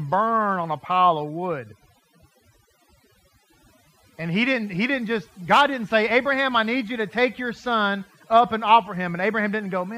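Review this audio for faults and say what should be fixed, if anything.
The background drops between phrases, broken by twinkling specks, across the whole clip. That is overdone noise removal: the reduction was set so strong that bands near its noise estimate were cut away together with the quieter parts of the speech. Set the noise reduction gentler, checking the result on the quiet passages before committing it.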